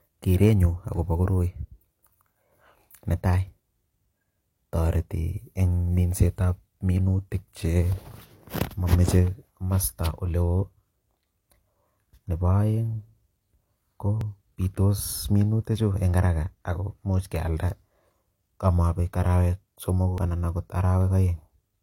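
Overlap between stream segments in this speech recording: timestamps on adjacent 2-second segments collide, so stretches of about 25 to 40 ms are trimmed away. Each leaves a click or tiny skip, at 4.23 s before "toreti eng minsetab minutik", 8.22 s, 14.21 s before "bitos minutichu eng haraka", and 20.18 s after "arawek somoku".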